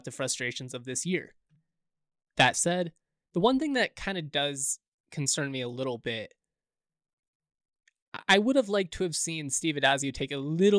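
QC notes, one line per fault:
Nothing to flag on this speech recording; there's no fault to note anywhere.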